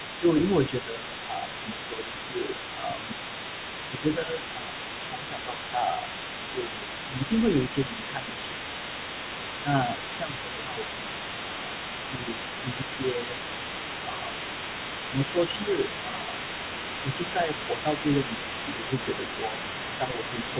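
From the start to the end of the clip, the other side's voice leaks through at roughly 10 dB below the main talker. This is likely loudspeaker echo the canceller left behind. It is a second, separate voice, not a smearing of the talker's own speech. Like everything else, it is confined below 4 kHz, which fits a narrowband call codec such as G.711.

Speech suppressed in double talk follows, likely caused by the canceller turning down both voices while they overlap. The talker's level sinks by up to about 5 dB during 0.2–3.32 s, 3.91–8.9 s, 9.63–13.34 s, 14.07–14.33 s, 15.09–15.37 s, 16.08–16.32 s and 17.03 s to the end. The dips line up with the leaking voice, unlike random dropouts.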